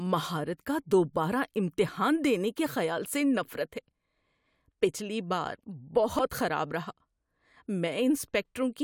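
At 6.19 s there is a brief blip in the speech. This is damaged data in a compressed stream. A short stretch of the encoded file is corrupt, so the decoder cannot read those frames properly. It loses its place and searches for the next valid frame header before playback recovers. The result is a single short glitch, over in well under a tenth of a second.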